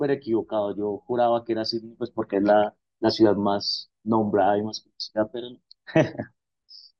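Throughout, the speech sounds dull and carries a gurgling, granular roughness, likely from MP2 compression at a low bitrate, which fits around 80 kbps. Starved upper sub-bands switch off and back on, so a spectrogram shows flickering, ragged gaps in the high range.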